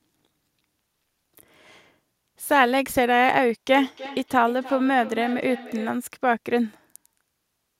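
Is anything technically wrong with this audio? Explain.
Yes. From 3.73 to 6.02 s the speech carries a feedback echo between two devices. A second device in the room is playing this call back, its output returns to the microphone, and no echo canceller removes it. Each phrase repeats about a third of a second later, peaking about 16 dB below the speech, and sounds thinner and more ringing each time. Room reverberation would smear the sound continuously. Here the repeats arrive as distinct copies at an even spacing.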